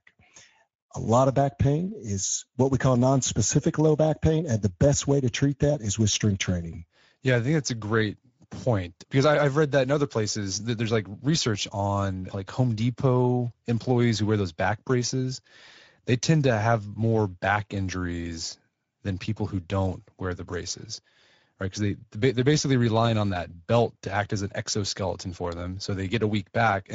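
From start to finish, the speech carries plainly audible Speex codec damage. Speex is a CELP coder from older VoIP and game chat. It models the voice with a filter driven by a coded excitation signal, and when that excitation gets a thin bit budget, the result sounds grainy and hoarse rather than clean. The bitrate here is roughly 16.8 kbps. You'll hear that rough, noisy texture the whole way through.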